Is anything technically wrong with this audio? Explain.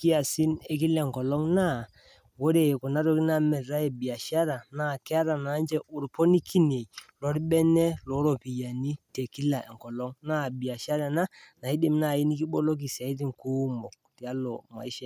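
No, nothing technically wrong can be heard anywhere in this speech recording.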